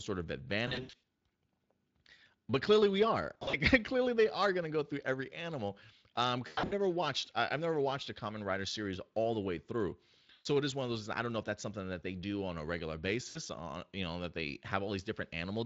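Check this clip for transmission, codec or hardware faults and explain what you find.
Yes, there's one recurring fault: VoIP packet loss concealed by the speech codec, at 0.67–1.03 s, 3.33–3.56 s (after "clearly we are"), 6.47–6.73 s (before "watched I have never"), 10.33–10.46 s (between "all the way through" and "it is one of") and 13.29–13.38 s. Each time, the decoder fills the gap by stretching the last sound into a buzzy tone or a coloured noise that fades. The speech stays weak for a moment after the packets return.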